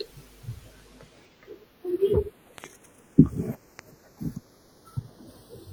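A speech clip with two problems. The channels drift apart throughout: the two sides run on clocks that disagree by a few tens of ppm, so the delay between them slides to around a fifth of a millisecond by the end. Summed to mono, this sounds like slow flanging, and a spectrogram shows comb notches sweeping gradually down through the upper range. Loud pops occur as a pair between 2.58 and 2.66 s and as a single pop at 3.79 to 3.81 s, each peaking roughly 15 dB above the speech, which continues underneath. These are likely voltage spikes from a plug, switch or static discharge. On the waveform they appear as sharp isolated spikes, and on a spectrogram as thin vertical broadband lines.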